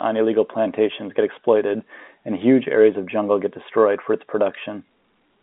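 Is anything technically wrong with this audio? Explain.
No, nothing in this speech is technically wrong. It has the narrow sound of a telephone line using G.711 coding, with the audio confined to roughly 250 Hz to 3.7 kHz, as that format carries it.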